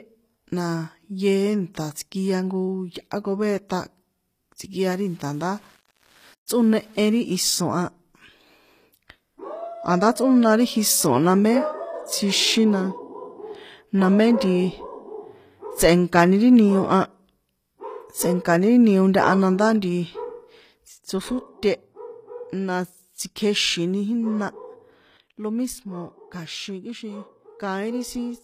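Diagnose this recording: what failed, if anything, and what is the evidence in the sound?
The upper treble sounds rebuilt rather than recorded throughout: nothing sits above 14.9 kHz, and the codec damage is plainly audible, with high-frequency detail that does not follow the harmonics beneath it. This is likely HE-AAC compression at the codec stage, at a rate that fits about 24 kbps. HE-AAC codes only the lower band and synthesises the top by spectral band replication. It copies lower bands upward and shapes them with a coarse envelope, so the treble has the right outline but the wrong fine structure.

From 4.83 to 7.17 s the speech turns grainy, with an error that rises and falls with the signal and sits roughly 35 dB below it. The likely cause is low bit depth without dither at a sample-format conversion, consistent with rounding to 8 bits. Without dither, the rounding error stays tied to the waveform instead of becoming neutral hiss. 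Quiet passages therefore pick up distortion, and detail smaller than one step is lost.

At 6.46 s, inside that grainy stretch, a short burst of hiss runs about 15 ms ahead of an attack, which sounds softened. This is pre-echo from the codec's transform. Quantisation noise is spread evenly across each block, so when a sharp onset falls late in a block, the noise sized for the loud portion also covers the quiet moment before it and smears the attack forward in time.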